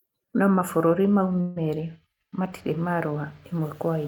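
Packets were likely delayed and the jitter buffer ran dry at 1.41 s, causing a call audio freeze: after "mabũrũri mau" the last sound stretches into a fading buzz for about 150 ms. Speech resumes at 1.58 s with "merĩ matirĩ", with nothing lost, only pushed later.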